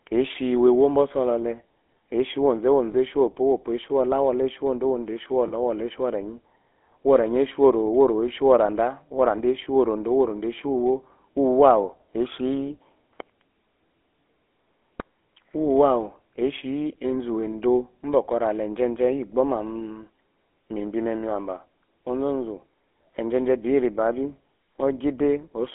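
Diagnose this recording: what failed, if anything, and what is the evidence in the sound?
The codec stage is the culprit here: the whole clip carries the buzzy, gravelly roughness of the GSM full-rate codec, which fits a 13 kbps coder. The band runs from 250 Hz to 3.4 kHz, and the pulse-driven excitation model is plainly audible throughout.

Then there are lost GSM frames on the network side: brief metallic rings at 2.92 s and 5.48 s, each about 20 ms, which points to one dropped frame apiece. The decoder reused the previous frame's settings instead of going silent.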